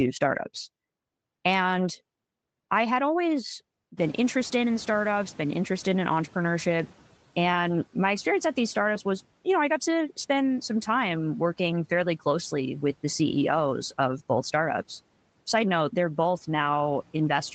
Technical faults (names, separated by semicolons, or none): noise suppressor catching up